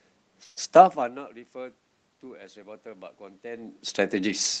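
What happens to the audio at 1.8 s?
Nothing goes wrong at 1.8 s; the audio is intact there.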